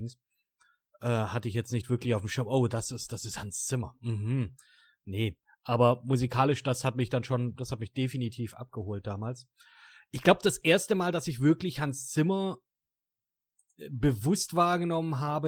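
No technical faults are audible.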